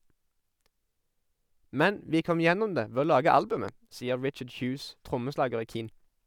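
At 3.69 to 3.71 s a single loud pop lands on the speech, peaking a few dB above it, likely from a brief voltage pulse such as static or a switching glitch. Unlike a dropout, the speech carries on uninterrupted beneath the thump.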